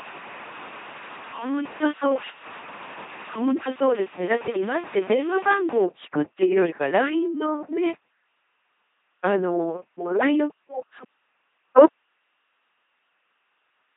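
From start to finish the speech has a buzzing, mechanical robot quality, with stray buzzes or hiss where the voiced or unvoiced decision goes wrong and nothing above 3.8 kHz. This is the LPC-10 vocoder, which rebuilds each moment from a pulse train or noise through a simple vocal tract filter. The heavy damage fits its 2.4 kbit/s rate.

From 0 to 5.84 s the sound is also grainy and gritty, and the grain shifts with the speech at roughly 20 dB below the signal. The likely cause is low bit depth without dither, with samples truncated to very few steps, which fits about 6 bits.

At 11.87 s the speech cuts out abruptly and does not return before the end, leaving only faint hiss roughly 40 dB below the earlier level. This is likely an audio dropout to a faint residue: the signal was lost while the path after the break stayed live.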